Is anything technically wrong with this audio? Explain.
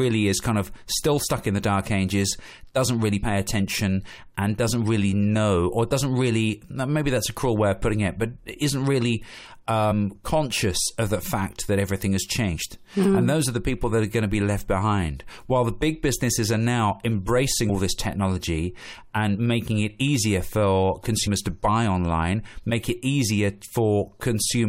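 Yes. Compressed frames are skipped at 3.22 s and 9.90 s: about two 23.2 ms frames drop, so the speech jumps ahead roughly 50 ms.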